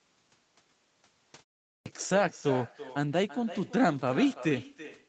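Every phrase in this speech clip is trailed by a fainter, thinner copy arriving roughly a third of a second later, about 15 dB down: echo with no canceller, where the far end's loudspeaker feeds its own microphone and the call sends the talker's voice back after the network round trip with nothing subtracting it. At 1.76 s, after a 0.4 s pause, speech bursts in abruptly with its onset missing, about 98 ms swallowed until 1.86 s. This is a clipped start after a pause, with the output device having dozed during the gap and needing time to wake before it passes audio again. Nothing above 8 kHz comes through, consistent with a band-limited call codec at a modest bitrate.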